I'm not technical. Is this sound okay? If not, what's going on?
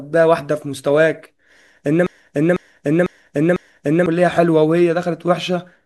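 No. From about 2.06 s to 4.06 s the speech gets stuck: the same half-second snippet plays four times in a row, like a scratched record, before the clip moves on. This is a broken-record loop. Most likely the playback or streaming stalled and kept resending the last chunk of audio it had. Whatever should have been said during those two seconds is missing and can't be recovered from this clip.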